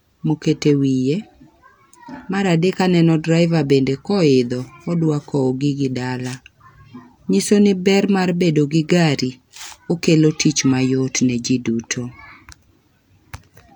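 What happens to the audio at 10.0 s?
Nothing goes wrong at 10.0 s; the speech there plays through intact, with no dropout, click or distortion.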